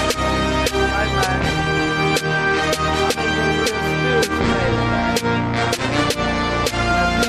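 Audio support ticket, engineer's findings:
No technical faults found on listening; signal chain sounds intact throughout, no action required.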